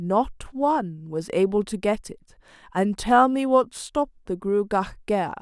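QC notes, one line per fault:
No audible faults found in this speech recording.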